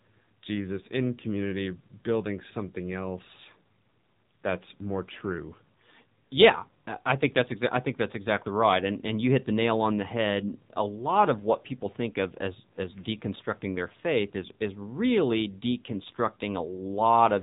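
From start to finish the speech carries AMR narrowband mobile codec damage. Nothing passes above 3.8 kHz, so it sounds thin and boxed in. The damage is plainly audible: a buzzy, synthetic edge from vocal-tract modelling, which fits a low rate near 7.4 kbps.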